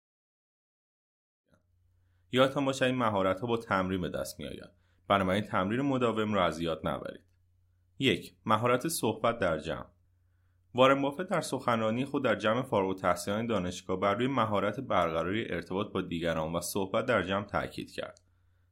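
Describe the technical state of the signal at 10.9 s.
At 10.9 s the speech signal is intact, with no technical fault present at that moment.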